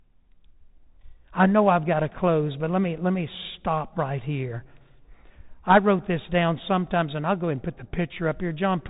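Speech carrying Bluetooth CVSD headset codec damage throughout: nothing above 3.8 kHz, scratchy s sounds and granular hiss from one-bit slope coding, which fits a 64 kbps headset link.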